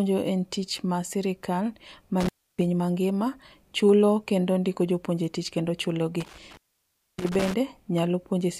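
Intermittent contact breaks the speech after "tich mar sirkal" at 2.20 to 2.61 s, with the line open about 300 ms, and after "ndiko jopuonje tich kendo" at 6.21 to 7.54 s, open about 610 ms. Crackle at each edge and faint hiss during the gaps mark a loose connection rather than a clean digital dropout.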